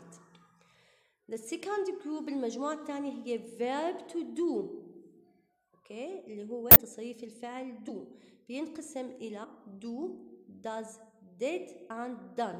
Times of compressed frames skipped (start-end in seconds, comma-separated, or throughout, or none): 6.69-6.76, 7.87-7.91, 9.43, 11.89